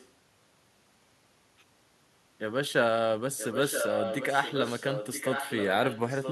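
A delayed copy of the speech trails it by 976 ms. It is only a faint scrap from 0.0 to 0.07 s, then becomes a strong, almost equal-level repeat from 3.37 to 5.7 s, and stays clearly audible from 5.86 s to the end. This is an echo leak, likely from the far side playing the call on a loudspeaker while its echo canceller failed to remove what its microphone picked up, sending it back.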